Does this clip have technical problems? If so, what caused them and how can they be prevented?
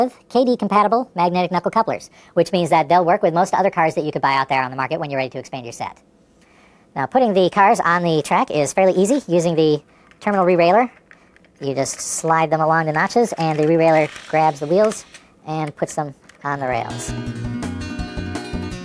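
Yes. A wrong sample rate affects the whole clip. Everything runs 1.38 times too fast and 5.55 semitones too high. That fits 16 kHz audio played back at 22 kHz. To prevent it, tag files with their true rate and resample to the device rate before playback.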